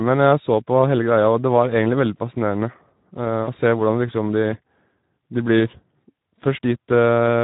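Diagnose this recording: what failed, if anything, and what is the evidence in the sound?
Speex codec, heard throughout the speech: a codec-stage fault. Voiced sounds come out hoarse and grainy. Too few bits are left for the excitation signal, which fits a setting near 11 kbps.

VoIP packet loss concealed by the speech codec, from 3.44 to 3.48 s: a network-stage fault. About 40 ms of speech turns into a smeared, stretched sound that fades. This points to two lost 20 ms packets, filled in by the decoder repeating its last pitch and filter at falling gain.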